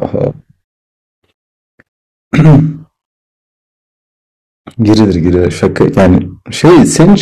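It's a speech clip with hard clipping in three places: a light touch from 0.03 to 0.27 s, about 2 dB over, then heavy fuzz from 2.35 to 2.60 s and 4.82 to 6.18 s, roughly 10 to 12 dB over, where flattened peaks spray harsh upper harmonics.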